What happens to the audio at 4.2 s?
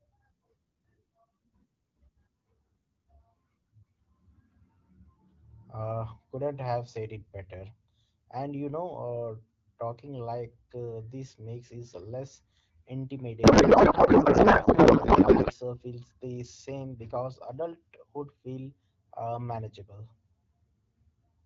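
Nothing goes wrong at 4.2 s: the speech carries on intact through the AMR wideband (HD Voice) codec, which at 12.65 kbit/s leaves it clear with only light coding damage.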